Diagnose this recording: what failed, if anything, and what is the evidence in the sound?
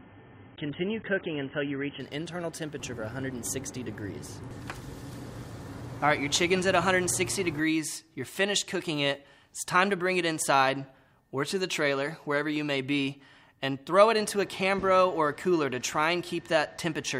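Playback began as an adaptive stream starting at a low bitrate. Until 2.0 s nothing exists above 3.8 kHz. Then quality jumps, with no gap.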